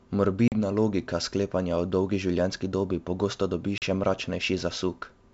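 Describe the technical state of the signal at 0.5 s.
A hard silent gap from 0.48 to 0.55 s, then speech resumes slightly distorted at "logika sklepanja o dolgi": packet loss on an ADPCM call, about two packets, desynchronising the decoder's predictor.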